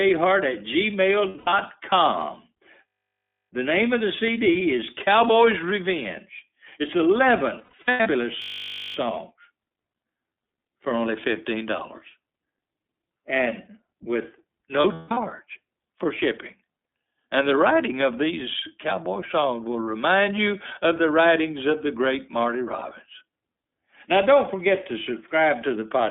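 Throughout, the iLBC codec confines the speech to about 250 Hz to 3.6 kHz with a rough, synthetic edge, the narrowband dullness setting it apart from wideband codec artefacts.

From 1.29 to 1.54 s, 7.57 to 8.08 s, 14.8 to 15.18 s and 19.85 to 19.88 s, lost iLBC frames are filled with a held, buzzy, breathy vowel built from the last pitch cycle. The speech snaps back immediately afterwards, with no lingering smear.

From 2.88 to 3.5 s and 8.42 to 8.96 s, a system hang loop repeats one 20 ms slice exactly, giving a steady 50 Hz buzz. It is identical on every cycle, unlike the noisy, fading concealment.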